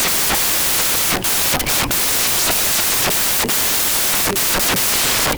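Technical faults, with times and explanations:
Throughout: samples built from the wrong bytes. The speech is heard as loud, harsh broadband noise for the whole clip. The reader is assembling each sample from the wrong bytes, through a one-byte offset, swapped byte order or a mismatched alignment, so the rapidly changing low-order bits land in the most significant position and become the large part of every value.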